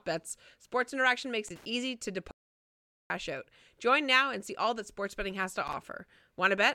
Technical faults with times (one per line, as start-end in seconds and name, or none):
1.48-1.65 loose connector crackle
2.31-3.10 audio dropout to silence
5.67-5.75 loose connector crackle